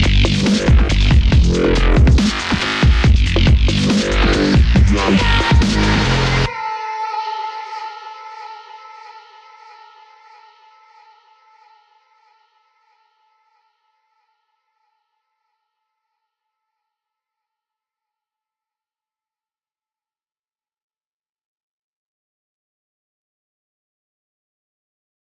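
No technical faults can be heard anywhere in the recording. Nothing in the sound calls for comment on technical grounds.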